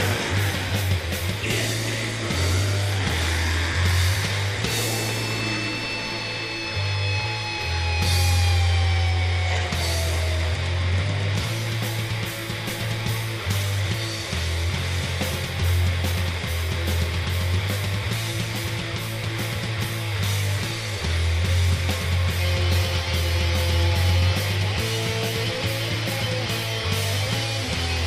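No technical faults are audible.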